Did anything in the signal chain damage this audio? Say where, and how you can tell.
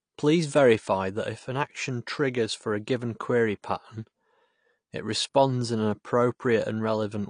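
Yes, at the codec stage, and across the whole clip rather than at any one moment. Nothing is present above about 9.8 kHz, and the speech sounds dull and smeared, with a fizzy, warbling texture on sibilants and held sounds. This is likely AAC compression, with damage that fits a low bitrate around 32 kbps. The encoder lowered its cut-off and quantised the remaining bands coarsely. A plain low-pass filter or resampler would leave the band below the cut-off clean, without this swirl.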